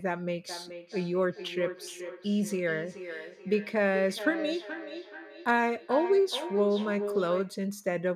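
Feedback echo between two devices runs from 0.49 s to 7.7 s: a second device in the room replays the call, its microphone recaptures that playback, and neither echo canceller removes it. The speech returns roughly every 0.4 s, thinner and ringing, peaking about 9 dB below the direct speech.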